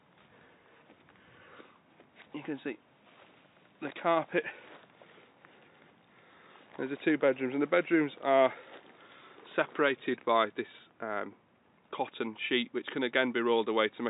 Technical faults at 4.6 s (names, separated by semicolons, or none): none